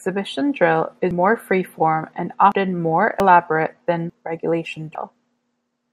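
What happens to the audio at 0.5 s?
Nothing goes wrong at 0.5 s: the speech plays through that moment intact, with no dropout, click or distortion.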